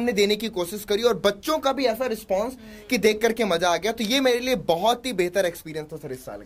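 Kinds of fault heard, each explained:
No audible faults present.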